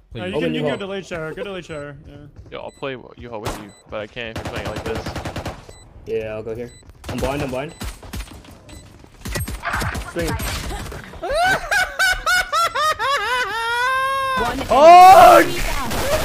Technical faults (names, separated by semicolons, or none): stuck bit